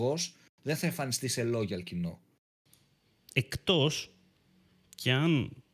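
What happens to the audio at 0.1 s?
At 0.1 s the speech plays through cleanly, with no dropout, click, distortion or other fault.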